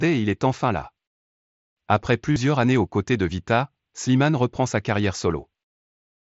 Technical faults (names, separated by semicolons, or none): concealed Bluetooth headset packet loss